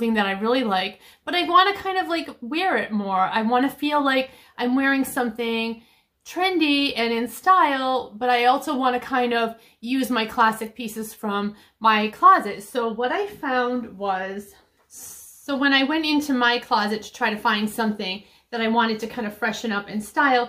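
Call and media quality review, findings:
No audible faults found in the audio; nothing to log.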